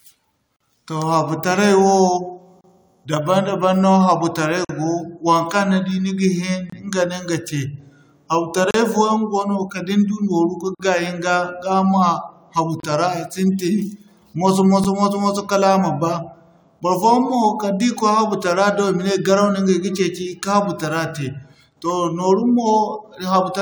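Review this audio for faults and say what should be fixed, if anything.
Gap between stream segments: hard-edged silences of 8 to 48 ms at 0.56, 2.61, 4.65, 6.70, 8.71, 10.75, 12.80 and 14.84 s, spaced every 2 s where mismatched segment timestamps leave holes. Unlike a dropout, the speech resumes exactly where it paused, with nothing missing. Fix by making each segment's start time match the previous segment's end.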